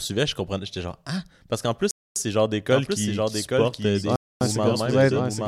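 Speech, interrupted by gaps between chunks from 1.91 to 2.16 s and again from 4.16 to 4.41 s: 250 ms holes with hard edges, spaced about 2 s apart. Nothing is missing afterwards, which separates them from dropouts where audio is lost. From 2.71 s to the end there is a doubled audio track, a full-band copy about 5 dB quieter trailing by roughly 0.7 s. It begins abruptly, with no decay or room colour, so it is not echo or reverberation. It is likely a second, slower capture path mixed in.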